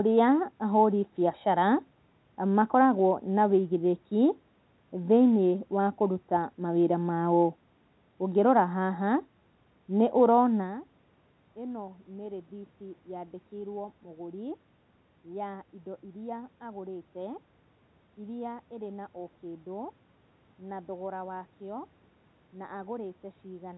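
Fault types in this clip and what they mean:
Nothing in this recording counts as a fault, so there's nothing to list here.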